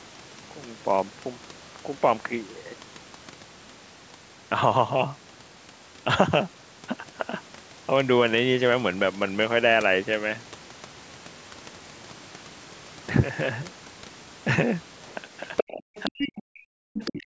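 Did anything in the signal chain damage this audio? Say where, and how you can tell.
Yes, in the last two seconds of this speech clip, and the damage sits in the call processing stage. A second voice surfaces at 15.07 to 15.12 s, faintly, then at 15.56 to 15.71 s at roughly the same level as the talker, and again at 15.95 to 16.32 s and 16.97 to 17.22 s, a little below the main voice. This is the other side's voice leaking through, likely because the echo canceller left part of the loudspeaker signal in the microphone path.

Overlapping those intrusions, the talker's own voice drops away sharply at 15.71 to 15.90 s, 16.07 to 16.13 s, 16.29 to 17.04 s, and from 17.21 s to the end, sinking by as much as about 40 dB. That is speech suppressed in double talk. With both parties sounding at once, the canceller likely could not tell the local talker from the echo and attenuated everything together. 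The absence of content above 8 kHz is the normal band limit of the call microphone processing.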